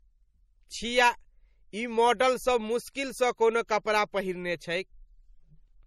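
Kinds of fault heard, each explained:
Transcoding between lossy codecs: the speech was likely encoded twice, in a way that fits a 48 kbit/s MP3 later re-encoded as 64 kbit/s AAC-LC. The second encoder wasted bits on the first one's artefacts, so both kinds of smearing overlap, and nothing remains above 15.3 kHz.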